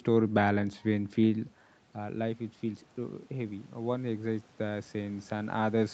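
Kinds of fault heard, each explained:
Automatic gain rising: The input level falls by about 11 dB at 0.57 s. The gain control hears this as too quiet and raises its gain step by step. The rise is slow and keeps going to the end of the clip. Speech and room noise grow louder together, so the background swells along with the speech. The talker's own moves near 1.5 s and 5.5 s add level shifts on top.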